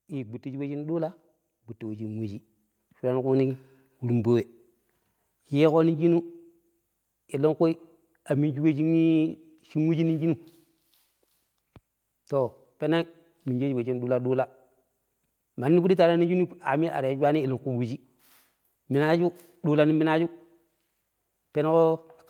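A speech recording with automatic gain rising from 0.42 to 3.63 s: the AGC decided the input was too quiet and eased its gain up by about 10 dB over those three seconds, so the voice and the room noise behind it swell together.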